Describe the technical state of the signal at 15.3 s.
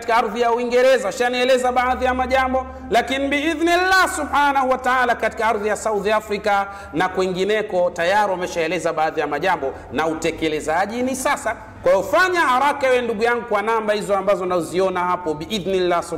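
At 15.3 s you're hearing the same hard clipping that runs through the whole clip: peaks driven about 5 dB past the clipping stage's limit get sliced flat, so loud moments crackle.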